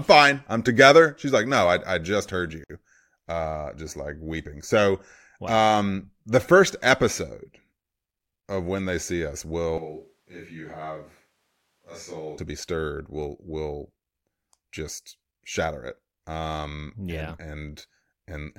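At 2.64 s, right after "I I just heard", the speech drops out for about 56 ms and then picks up again with "uh just like weeping", carrying on from exactly where it stopped. That's a gap at a join of encoded pieces: two separately encoded chunks were stuck together without trimming, so the encoder's start-up delay and the padded last frame both stayed in. The edges of the hole are smeared by the codec.

Then from 9.78 s to 12.38 s, starting after "when they see us" and running until "be stirred will will", the sound suddenly goes hollow and roomy, thinner in the bass and roughly 10 dB quieter, with background noise now sitting only around 35 dB under the speech. It snaps back just as abruptly at the end. That's most likely a switch to a distant microphone, with the close mic's signal dropping out and a farther one filling in.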